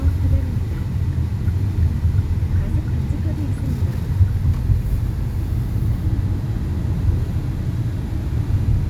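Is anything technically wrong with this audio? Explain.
No, nothing technically wrong turns up here, and these sounds come through just as they should all the way.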